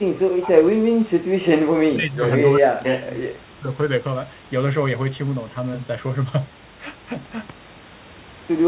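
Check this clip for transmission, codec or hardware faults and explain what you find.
One fault is present: the speech is repeatedly pushed down in level during the first few seconds.

The speech suppressed in double talk occurs from 0 to 1.47 s, 1.85 to 2.27 s and 2.49 to 3.7 s. In those stretches the speech sinks sharply, by around 40 dB at its deepest, before recovering. The likely cause is both sides talking at once: the echo canceller could not tell this talker from the loudspeaker echo and suppressed everything. Throughout, the sound is band-limited to 4 kHz, as expected over a G.711 mu-law call path.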